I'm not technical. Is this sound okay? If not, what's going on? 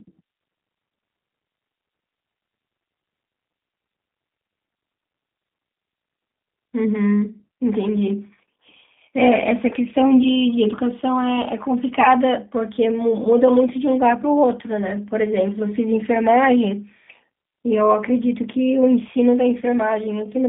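No, not quite. The whole clip has gone through the G.729 codec, a phone-call compressor that rebuilds the speech from a rough model of the voice. Everything above about 3.7 kHz is gone, so it sounds muffled, slightly rough and a bit robotic.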